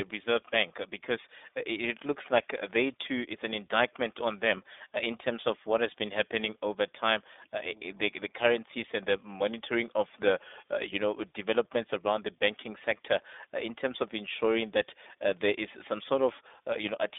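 From start to finish the speech carries the iLBC codec's narrowband sound: nothing above 3.8 kHz, thin low end, and a plainly rough, synthetic edge from coding each 20 ms frame separately.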